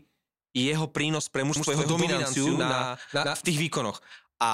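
From 1.56 s to 3.52 s, a second, slower capture path is likely mixing in another copy of the speech. This doubled audio track trails about a tenth of a second behind at roughly equal loudness. It is dry and uncoloured, and starts and stops abruptly.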